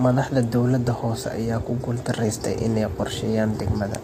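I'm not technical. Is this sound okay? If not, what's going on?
No. The speech sounds rough and grainy from start to finish, with a hiss filling the gaps between the tones of the voice and a top end that seems dull or artificial. This is likely low-delay AAC compression, the kind used on video calls. To keep the delay tiny, it squeezes the sound in very short slices, which capture the pitch of a voice poorly, and at this strength the damage is plainly audible.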